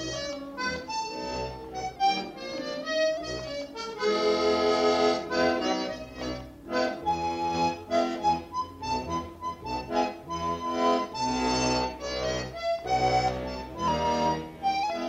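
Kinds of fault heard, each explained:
Drift correction step: clock-matching software likely slowed playback in a single jump to refill its buffer, so the sound runs 6.2% slow and sags 111 cents, just over a semitone, from 1.96 to 3.17 s and 13.88 to 14.83 s, then snaps back to pitch.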